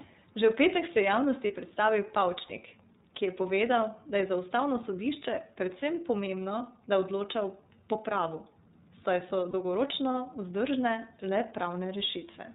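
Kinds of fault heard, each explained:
iLBC codec: The speech is squeezed into narrowband 30 ms frames, which fits a 13.33 kbps mode. Nothing above 4 kHz survives, and the voice sounds plainly rough and synthetic.
Lost iLBC frames: Two single 30 ms frames drop out, at 1.47 s and 9.51 s. Each gap is bridged by a brief buzzy, held sound. Clear speech returns almost immediately.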